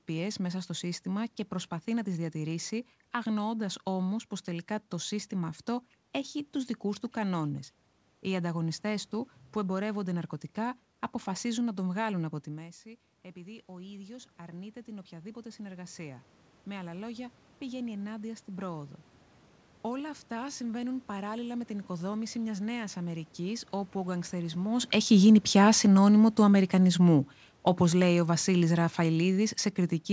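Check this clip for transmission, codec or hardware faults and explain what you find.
Two automatic gain control faults are present, both reacting to changes in the talker's distance, heard through a call path that carries nothing above 8 kHz.

Automatic gain rising, 12.46 to 18.98 s: after the talker moves away around 12.5 s, the level drops by about 15 dB. The control then slowly adds about 10 dB. Room noise swells along with the speech, which a talker simply moving closer would not cause.

Automatic gain falling, 24.78 to 29.48 s: the talker moves around 24.5 s. The control then lowers its gain by about 8 dB over several seconds. Speech and background sink together, unlike a talker leaning back, where only the voice fades.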